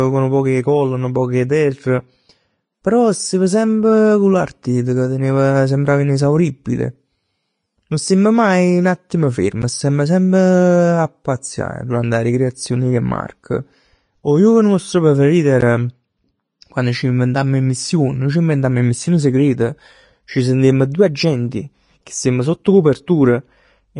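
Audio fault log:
throughout: Vorbis compression. Audible codec damage runs through the whole speech clip, with nothing above 10.6 kHz. The treble is hissy and grainy, and consonant attacks blur. This is likely a Vorbis encode at a bitrate around 32 kbps. The encoder keeps a smooth spectral envelope but quantises the residual detail so coarsely that fine structure turns to noise of similar energy. A spectrogram shows a hard ceiling at 10.6 kHz and speckled, smeared texture below it in place of clean harmonics.
9.62 s and 15.61 s: block of digital silence. The sound drops out abruptly with no fade, for 11.61 ms and then 14.72 ms. The first gap fits a 512-sample block. A buffer left unfilled in time and a calculation producing invalid values are both possible causes. Each gap is shorter than about 15 ms, so it is heard as a brief tick or dip rather than true silence. The waveform shows a flat, empty slot with sharp edges. 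The spectrogram shows a thin vertical gap crossing all frequencies.
22.64 s: pre-echo. About 11 ms of hiss comes just before a sharp attack, softening its onset. The codec spreads quantisation noise evenly across its transform block. When a loud transient sits late in that block, noise sized for the loud part also fills the quiet stretch before it. A spectrogram shows a faint broadband smear leading into the attack. The waveform shows a low-level fuzz ahead of the onset rather than a clean rise.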